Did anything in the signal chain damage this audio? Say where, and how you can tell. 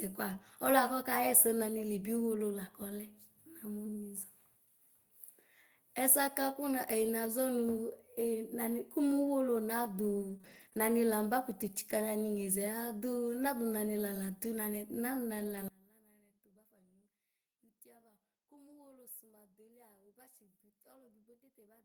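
Yes, at four places, from the network, the codec and the channel wiring.

At 2.89 to 2.91 s and again at 15.39 to 15.57 s, the audio turns briefly rougher and noisier without any gap. This is a lost packet rebuilt from error correction. The first event lasts 20 ms, which fits a single lost Opus packet. The second lasts 100 ms, which points to about five separate lost packets. In each case the decoder played the low-bitrate copy carried in the following packet, so continuity holds but detail is coarser.

From 10.29 to 10.79 s the sound turns choppy. This is repeated packet loss, a network-stage fault. Four separate holes appear within that half-second, the longest about 21 ms. About 79 ms in total is filled by extending the previous sound, roughly 16% of the stretch. Because each patch is followed closely by another, the loss concealment gives a robotic texture, and about 80 ms of sound is simply missing.

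From 15.68 s to the end, the mono sum drops by about 28 dB, and the centred speech nearly vanishes. What remains is only the difference between the channels, a faint residue. This is the signature of one channel inverted: the common content cancels when the channels are summed. The likely cause is reversed polarity on one leg of the stereo path, most plausibly in the wiring or a channel-routing stage.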